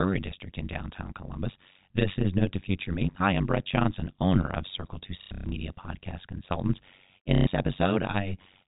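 Overlap-add ripple runs through the whole speech clip. The frames were rejoined with an overlap whose gain does not sum evenly, so the level dips by about 60 dB around 100 times a second. It is heard as a harsh, metallic buzz with extra tones around each note, and the waveform shows a regular comb of deep notches in the envelope.

Packet loss with last packet repeated strikes from 5.22 to 5.52 s, where about 240 ms goes missing in bursts over 300 ms. The longest run is 120 ms. The receiver loops the last good packet, which fits 30 ms packets, so the runs buzz at roughly 33 Hz. The second loss, from 7.35 to 7.47 s, repeats for 120 ms. On a spectrogram both appear as frozen, vertically striped blocks with sharp edges, below the 4 kHz ceiling set by the G.711 telephone coding.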